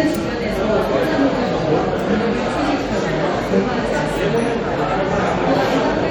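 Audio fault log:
No faults detected.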